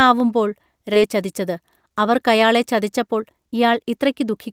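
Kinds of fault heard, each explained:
Skip ahead: At 0.93 to 0.95 s the playback jumps forward, dropping roughly 0.7 s of speech that was discarded while later audio was already queued. Nothing fills the break. The audio on either side is butted together directly, so the sound lurches from one point to a much later one with no pause. The join arrives abruptly.
Jitter buffer speed-up: From 1.15 s to 4.39 s the receiver works off excess buffered delay by repeatedly cutting out short pitch-period-sized slices of the waveform. Pitch is preserved, but the speech runs at about 109% of its natural rate. Roughly 0.3 s is removed in total, and the delivery sounds hurried and clipped in rhythm through that stretch.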